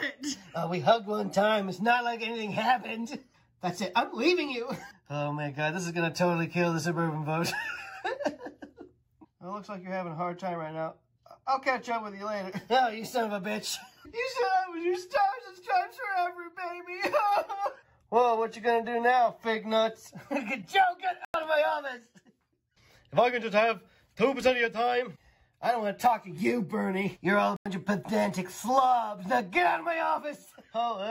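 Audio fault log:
21.25–21.34 s and 27.56–27.66 s, corrupt frame muted: the decoder rejected damaged frames, so the sound cuts abruptly to silence for about 94 ms, showing as a flat waveform gap and a blank spectrogram stripe.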